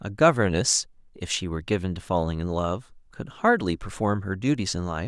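No technical faults can be heard anywhere in the recording. The speech runs its full course with nothing in the signal chain audibly going wrong.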